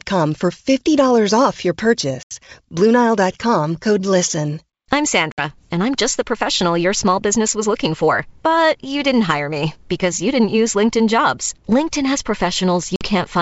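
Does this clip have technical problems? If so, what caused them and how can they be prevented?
Yes. Packet loss on an ADPCM call dropped several packets at 2.23–2.32 s, 5.32–5.41 s and 12.96–13.05 s, losing 80, 60 and 50 ms. Silence filled each hard-edged hole. The receiving decoder's predictor and step size then drifted from the sender's, so speech resumes slightly distorted before settling. Packet loss concealment, forward error correction and a decoder-state reset after each gap would prevent it.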